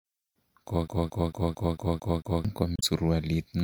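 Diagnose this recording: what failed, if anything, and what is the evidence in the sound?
A playback-stage failure: the CD got stuck on one turn, a scratch knocking the laser back a track each revolution. From 0.88 to 2.45 s the same 224 ms of speech repeats seven times, each pass cut by a brief mute at the jump, giving an even, rapid stutter.

A storage or transmission fault, damaged data in a compressed stream, hits at 2.76 to 2.84 s. The decoder met corrupted frames, lost sync and hunted for the next valid header, producing a short glitch where that 80 ms of speech should be.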